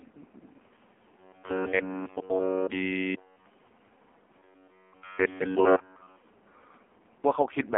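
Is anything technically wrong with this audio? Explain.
Yes. The whole clip has been squeezed through an AMR narrowband mobile codec running at its lowest setting. The heaviness of the damage points to about 4.75 kbps. The codec rebuilds speech from a crude vocal-tract model fed with very few pulses, and the phone-line band keeps only 300 Hz to 3.4 kHz. So the speech sounds thin, boxy and buzzy, with nothing above 3.4 kHz and a synthetic, heavily processed edge throughout.

From 1.19 to 3.46 s and again from 4.38 to 6.16 s there is robotic sound from repeated short buffers. The likely cause is audio arriving too late, so the playback side loops a tiny slice, about 10.7 ms long, instead of playing new material. In both stretches essentially all of the sound is this repetition. It imposes a fixed 93.8 Hz buzz on the speech, which becomes a rigid metallic drone that only loosely tracks the original.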